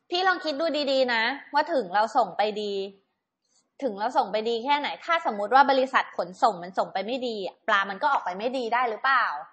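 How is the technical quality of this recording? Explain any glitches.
The technical quality is poor, with compression damage running through the whole recording. MP3 compression, present from start to finish, is the likely cause: the encoder, starved of bits at what sounds like about 32 kbps, cut everything above 8.3 kHz and dropped weak frequency lines frame by frame, leaving the speech dull, watery and swirly, with metallic chirping on s sounds and smeared consonant attacks.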